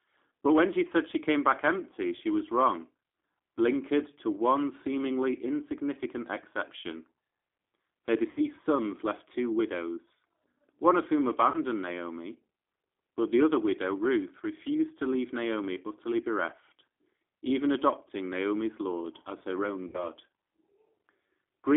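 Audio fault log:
throughout G.729 codec: The sound is thin, boxed-in and slightly rough, with a plainly synthetic edge. The band runs only from about 250 Hz to 3.6 kHz, so there is no warmth below and no air above. This fits G.729A at 8 kbit/s. It does not store the waveform. It rebuilds each 10 ms frame from a vocal tract filter, a pitch predictor and a few pulses, so fine detail is lost and the texture turns coarse.
8.31–8.41 s, 11.50–11.58 s, 19.88–20.09 s VoIP packet loss concealed by the speech codec: In each spot the sound is stretched out and fades, then comes back weak and distorted before it recovers. The gaps cover about 60 ms, 40 ms and 60 ms, which fits three, two and three lost 20 ms packets. The decoder filled each gap by repeating its last pitch and filter at falling gain. Each frame is built on the one before, so the damage lasts past the point where packets arrive again.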